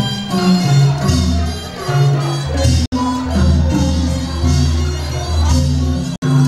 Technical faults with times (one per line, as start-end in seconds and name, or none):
2.86-2.92 Bluetooth dropout
6.16-6.22 Bluetooth dropout